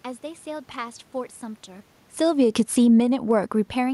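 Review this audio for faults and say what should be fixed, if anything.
Automatic gain falling runs from 2.06 to 3.11 s. The gain control judged the input too loud, or its background noise too strong, and pulled its gain down by about 11 dB. The drop is gradual, not a step. The speech sinks over roughly a second, and the room noise sinks with it. That shared fall marks it as gain action, not a quieter talker. The level shift near 1.5 s is different: it sounds like the talker moving, which is not a fault. To prevent this, slow the gain control's attack or raise its threshold so brief loud passages don't trigger a cut.

Automatic gain rising follows from 3.05 to 3.73 s. It overlaps the end of the fall. The input level dropped by about 24 dB, so the gain control read it as too quiet and raised its gain by about 6 dB. Speech and background swell together over about 0.7 s. This pumping right after the cut makes the level seesaw. 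The room noise rises as the gain climbs. To prevent this, lengthen the gain control's release time so a short quiet stretch doesn't send the gain back up.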